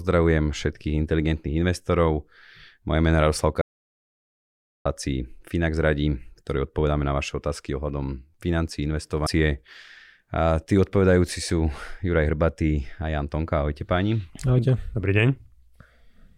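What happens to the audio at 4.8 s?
At 4.8 s the speech is still inside an audio dropout to silence. The gap runs from 3.61 s to 4.85 s, about 1.24 s in all. The sound cuts off mid-flow and falls to silence, with no room tone underneath. At 4.85 s it snaps back in just as abruptly. The likely cause is a lost input, such as a disconnected device or a brief mute, while recording carried on writing silence. Whatever was spoken in that span is gone.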